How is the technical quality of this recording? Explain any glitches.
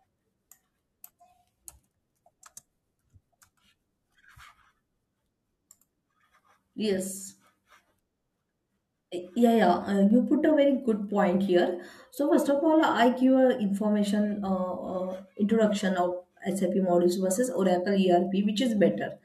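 There is one audible glitch in the speech, a single sharp click at 10.11 s, just before "you put a". This is likely dropped samples: a fraction of a millisecond of the stream goes missing, so the waveform jumps abruptly to a later value. The gap is far too brief to lose any sound and is heard only as that instantaneous click.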